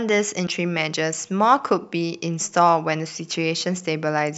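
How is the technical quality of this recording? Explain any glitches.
One glitch affects the speech. From 0.43 to 0.48 s, damaged data in the compressed stream makes the decoder misread frames and lose sync, producing a brief chirp, squawk, click or short hole.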